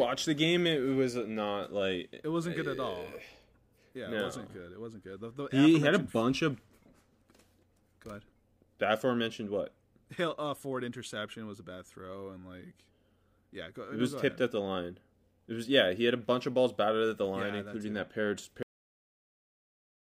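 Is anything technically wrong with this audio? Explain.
Yes. At 18.63 s the speech stops abruptly mid-sound and drops straight into digital silence, with no natural decay, for the remaining 1.5 s. This is a cut-off end: the final buffers of audio were never written or played, so the recording simply ends early.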